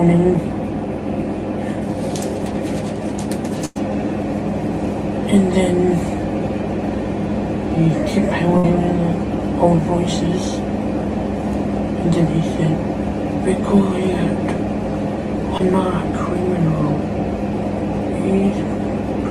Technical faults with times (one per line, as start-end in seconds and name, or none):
3.65-3.77 burst of packet loss
8.57-8.66 burst of packet loss
15.58-15.61 short concealed packet loss